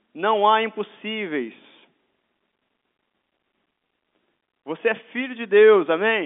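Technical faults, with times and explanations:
No technical faults are present; the audio comes through a standard G.711 telephone channel with nothing above about 3.7 kHz.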